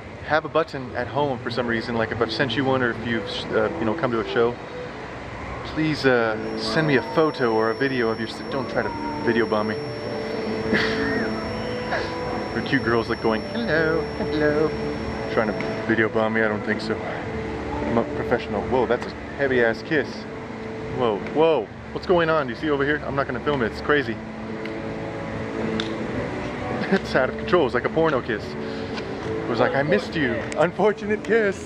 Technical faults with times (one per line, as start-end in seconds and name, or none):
6.33-15.90 feedback whistle